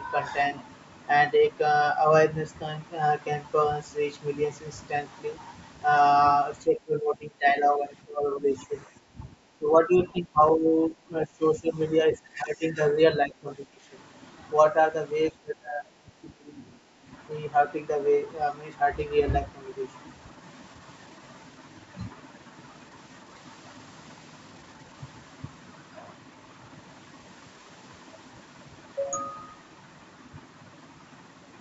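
The speech repeatedly sinks by roughly 15 to 20 dB at 6.64–8.75 s, 8.96–9.28 s, 9.58–10.39 s, 10.56–11.78 s, 12.12–12.79 s, 13.24–13.8 s and 15.3–16.62 s. This is likely speech suppressed in double talk, where the echo canceller ducks the talker along with the far-end echo. At 16.9–17.05 s the room sound briefly dips by about 9 dB: background gated by the echo canceller while the loudspeaker plays.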